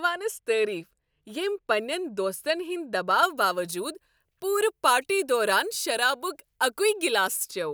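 From 3.23 s to 7.51 s, pre-emphasis is left on: the treble boost applied before transmission, here the FM 50 µs curve, is never undone by the matching de-emphasis on playback. Highs sit about 10 dB above 1 kHz at 10 kHz, so the speech turns thin and glassy, with hissing, over-sharp sibilants and an edgy brightness.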